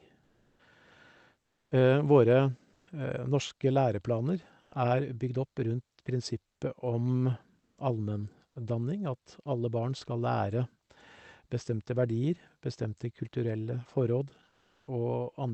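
Comfort noise replaces the background in six speech pauses: 0.23–0.59, 1.41–1.71, 2.73–2.87, 4.61–4.71, 7.59–7.77 and 14.49–14.87 s. The real room tone gives way to steady, featureless hiss, up to about 7 dB quieter or about 5 dB louder, likely from Opus DTX.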